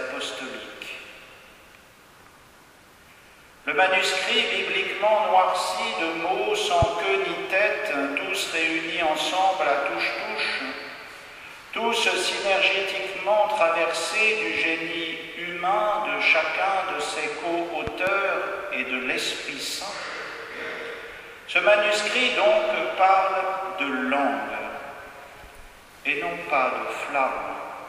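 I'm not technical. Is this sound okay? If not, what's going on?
No. There are two loud pops: a single pop from 6.82 to 6.85 s, and a double pop, two in quick succession, from 17.87 to 18.10 s, the second event noticeably stronger. The likely cause is a sudden jolt of electricity, from a plug, switch, static or equipment glitch, briefly adding a sharp thump to the recording. The sound keeps playing underneath each pop.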